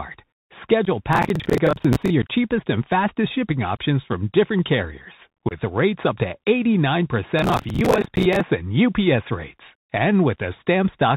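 The whole clip of speech runs through a Bluetooth CVSD headset codec. Nothing above 4 kHz survives. The one-bit, 64 kbps coding adds a granular hiss, and loud sibilants come out scratchy as the adaptive step lags behind.

At 0.85 to 0.90 s comes unconcealed Bluetooth headset packet loss. About 15 ms drops out with hard edges. The audio returns briefly quieter.

From 1.13 to 2.10 s there is processor overload crackle, ending just before "your cheapest and fastest". Dozens of buffers around 10 ms long missed their deadlines. Each one replayed old audio, and together they make a gritty tearing.

At 2.22 s, just before "cheapest and fastest shipping", a further 11 ms packet gap follows. At 5.49 to 5.52 s, between "options from different carriers" and "rates up to", a 22.5 ms hole opens.

From 7.39 to 8.41 s, the crackle returns. It is a burst from roughly fifty missed buffers.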